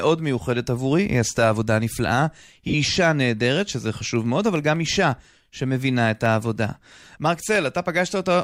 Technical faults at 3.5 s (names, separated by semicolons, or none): periodic USB or driver dropouts